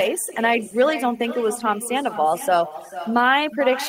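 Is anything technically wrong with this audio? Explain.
Yes, there are three faults in this speech clip.

Overdone noise removal runs through the whole clip. A noise reducer set too aggressively has pushed individual frequency bands down or off wherever they came close to its noise estimate, taking the softer parts of the voice with them. The background drops and breaks up into twinkling specks, and the voice loses its quieter detail.

Echo with no canceller is also present throughout. The far end is playing the call through a loudspeaker, its microphone captures that playback, and nothing cancels it, so the talker's own voice returns after the network round trip. Every phrase is trailed by a second copy arriving about 0.4 s later, about 14 dB quieter and thinner than the original.

A lost packet rebuilt from error correction occurs twice, at 0.35–0.37 s and at 1.55–1.61 s. The first spans 20 ms, which fits a single lost packet. 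The second covers 40 ms of rebuilt audio, which fits two lost packets. In each case the following packet carried a low-bitrate backup copy of the missing audio, so the decoder filled the hole instead of leaving silence. Those stretches sound briefly rougher and noisier than the surrounding speech.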